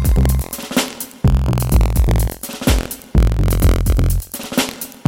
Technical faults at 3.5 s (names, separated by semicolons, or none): buffer tearing